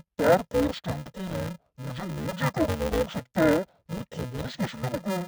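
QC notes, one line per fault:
Throughout: interleaved audio read as planar. The speech sounds dull and robotic, with a steady buzz near 375 Hz. Each block of about 2.67 ms, which fits a 128-sample block, has its alternating left and right samples split into halves, so each channel plays two slowed copies of a tiny fragment at once. Because the blocks are so short, there is no clear octave drop or doubling as with long blocks. The speech keeps its normal pace, unlike a sample-rate mismatch.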